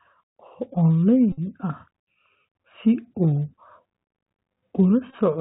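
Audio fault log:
throughout Bluetooth CVSD headset codec: the link is coding the speech one bit per sample, with each bit only saying whether the level steps up or down and the step size adapting as it goes, which fits a 64 kbps CVSD stream. Nothing above 4 kHz gets through, so the speech sounds narrow and boxed. Fast, loud high-frequency movement outruns the step and distorts, s sounds come out scratchy, and a granular hiss sits under the speech the whole way.
1.32–1.39 s and 5.10–5.14 s Bluetooth headset packet repeated: voice packets between headset and phone went missing, and the decoder replayed the previous packet's bits instead of going silent. The first event loses 52.5 ms, heard as a steady buzz near 267 Hz from the copy recurring every 3.75 ms, which points to about 14 lost packets. The second loses 33.8 ms scattered over 45 ms, with the longest run around 15 ms, so it is briefer broken buzzing and ticks.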